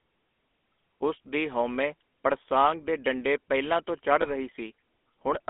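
A buzzy, gravelly roughness runs through the whole of this speech clip, with a thin telephone tone and nothing heard below about 250 Hz or above about 3.5 kHz. That is the sound of the GSM full-rate codec, whose damage here is plainly audible. It rebuilds the voice from a vocal-tract model driven by regularly spaced excitation pulses, keeping only a third of the excitation detail, which fits its 13 kbps rate. Just after "ਡੰਡੇ ਪਹਿਲਾਂ ਤੋਂ ਚੜ੍ਹ", from 4.22 to 4.34 s, the sound briefly freezes into a rough, metallic ring before the speech resumes. These are lost GSM frames. The decoder fills the gap by repeating the last good frame's settings, and the short ring points to a single missing 20 ms frame.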